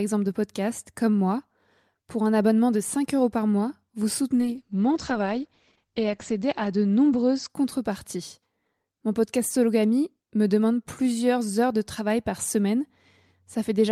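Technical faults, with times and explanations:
4.35–7.99 s, call bitrate drop: just after "euros par mois vous" the audio turns rough and muffled as the high end is cut from 20 kHz to 8 kHz. This fits the encoder being throttled from about 48 to 10 kbps, coarsest for 1.83 s, before recovering.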